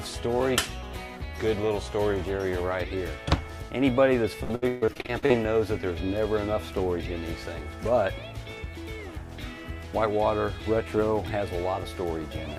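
The audio suffers repeated packet loss (robotic sound) from 4.43 to 5.35 s, with about a dozen short dropouts, the longest 136 ms. Each gap is patched by extending the preceding sound, so about half this stretch is synthetic fill, giving choppy output.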